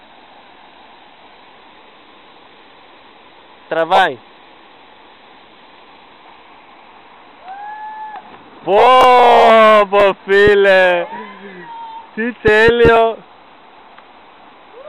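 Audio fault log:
9.01–9.04 s and 10.00–10.02 s, chunks out of order: a 10 ms slice of audio arrives late, two slices behind at 9.01 s and one behind at 10.00 s. Nothing's lost, but the shuffled order and hard joins give a quick jumbled blip.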